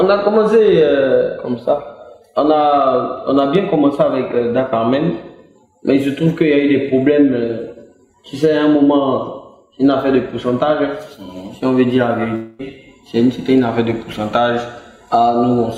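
From 12.35 to 12.61 s, audio likely stopped arriving over the network for about a quarter of a second, a long network dropout. The receiver covered the gap by extending the last sound it had, filling about 235 ms with a buzzy or hissy continuation that fades rather than falling to silence. When the stream resumes, roughly 240 ms of the original audio is simply gone, so the sound jumps ahead past the lost material.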